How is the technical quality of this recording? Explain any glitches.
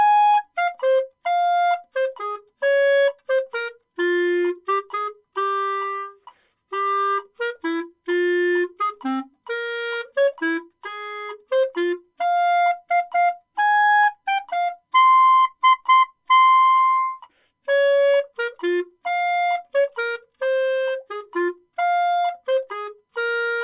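Nothing here glitches or breaks up at any point, so there's no fault to explain.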